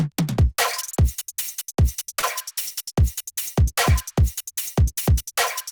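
From 2.19 to 2.26 s, short concealed packet loss: about 40 ms never arrived, and the receiver extrapolated the previous sound to fill the gap, producing a brief smear instead of a silent dropout.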